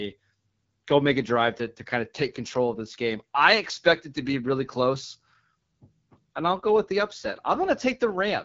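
AMR wideband (HD Voice) codec throughout: nothing above 7.5 kHz, and the coarse pulse-driven speech model sounds rough and raspy, which fits an 8.85 kbit/s rate.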